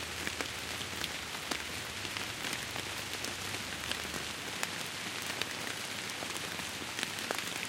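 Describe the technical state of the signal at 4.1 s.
Around 4.1 s the signal is intact, with no dropout, clipping, glitch or other technical fault at that moment.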